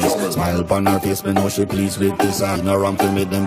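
Damaged data in a compressed stream appears from 2.54 to 2.57 s: corrupted bytes in the encoded stream make the decoder misread those frames and lose sync while it hunts for the next valid frame header, producing a brief chirp, squawk, click or short hole in the sound.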